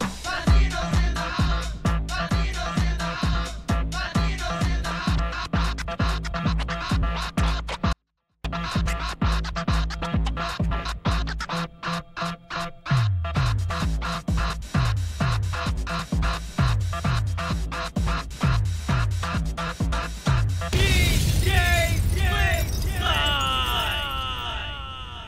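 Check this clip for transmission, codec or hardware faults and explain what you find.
One fault stands out: a 24-bit alignment error (too quiet) from 7.93 to 8.45 s. For these 0.52 s, 24-bit samples stored in the low bytes of 32-bit words were read as full 32-bit integers, dropping the level about 48 dB. The sound stays clean but nearly inaudible, with abrupt level changes at both edges.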